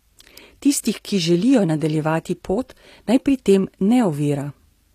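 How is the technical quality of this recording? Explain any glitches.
The recording has one real problem: codec damage you can plainly hear, running through the whole speech clip. It's likely HE-AAC compression at a low bitrate, something in the region of 24 kbps. The lower band is coded properly, and the treble is copied up from below and shaped roughly, so the upper harmonics don't line up. That's why the s sounds come out gritty and a bit lispy, and nothing reaches past about 14.9 kHz.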